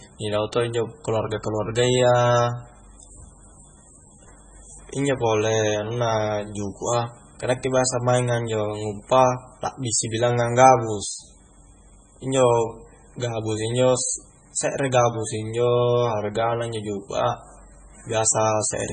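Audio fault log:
throughout, MP3 compression: the speech has nothing above 9 kHz and heavy codec damage, with a watery, swirling texture as weak frequency lines drop in and out between frames, and s sounds turning chirpy and metallic. The likely cause is a low-bitrate MP3 encode, which fits a rate around 16 kbps. Unlike a plain low-pass filter, which would only dull the top, this flickers and warbles inside the remaining band.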